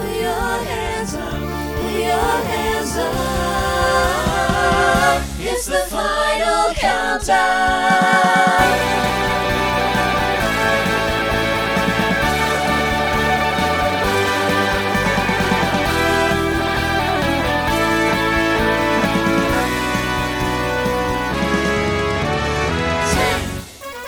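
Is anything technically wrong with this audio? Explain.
No, nothing technically wrong can be heard in this audio. No fault shows up anywhere in the recording.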